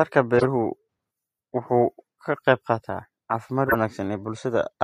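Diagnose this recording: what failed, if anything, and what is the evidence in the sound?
Two short, loud chirps of noise cut through the speech, from 0.37 to 0.44 s and from 3.67 to 3.75 s, both with error peaks around -5 dBFS. This is a codec fault, a corrupt frame decoded: flipped bits in a few consecutive compressed frames were decoded anyway, spraying energy into wrong frequencies.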